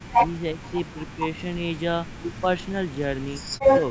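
From the start to 1.86 s the speech dips, by about 25 dB at worst, for roughly one and a half seconds in total. This is speech suppressed in double talk, likely an echo canceller ducking the near talker while the far side speaks. Inside that stretch, at 0.63 to 0.71 s, a faint scrap of the voice returns 355 ms late, about 30 dB below the speech. This is an echo leak, likely residual loudspeaker pickup the canceller missed. A delayed copy of earlier sound marks it apart from the surrounding level dips. Further suppression follows at 2.39 to 2.76 s (about 25 dB), briefly and lightly at 2.93 to 3.03 s (about 5 dB), and from 3.49 s to the end, where the drop reaches about 40 dB and nearly cuts the sound out.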